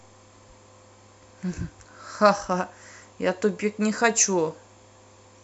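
No technical faults are audible.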